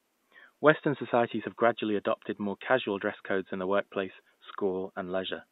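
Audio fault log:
No technical faults heard.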